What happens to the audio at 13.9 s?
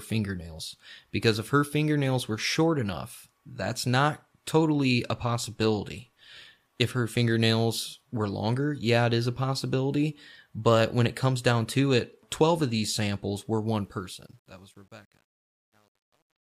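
At 13.9 s the speech is inside a span of truncation distortion on a fade, running from 13.81 s to the end at 16.55 s. The fade-out stage keeps only 10 bits and adds no dither, so as the level drops toward the smallest step the waveform collapses into coarse square steps. The tail turns gritty, at its worst from 14.49 s onward, instead of dying away cleanly.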